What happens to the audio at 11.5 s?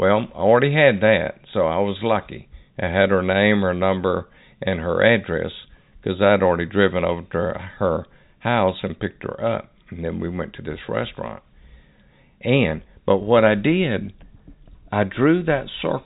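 Nothing goes wrong at 11.5 s: the speech carries on intact through that moment, still with the narrow telephone band of G.711 coding that stops short of 4 kHz.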